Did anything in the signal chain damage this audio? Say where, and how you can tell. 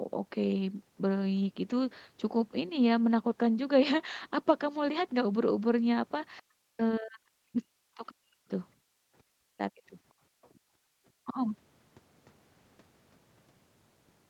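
Yes. Call processing, at the echo canceller. From 6.41 to 8.51 s, 9.35 to 9.83 s and 11.24 to 11.37 s the talker dips hard, up to about 40 dB, in pieces. That's likely speech suppressed in double talk, with the canceller mistaking near-end speech for echo and squashing both.

Same stage, different symptom: background gated by the echo canceller at 8.78 to 9.07 s and 10.2 to 10.96 s. The room sound drops by about 31 dB and about 28 dB respectively, then comes back, which is the suppressor clamping the mic while the loudspeaker plays.

Around 10.42 to 10.6 s there's a faint second voice, roughly 35 dB under the talker. That's likely the other side's voice leaking through: residual loudspeaker echo the canceller didn't fully subtract from the mic, surfacing briefly as a scrap. The band-limiting at 8 kHz comes from the Opus call path.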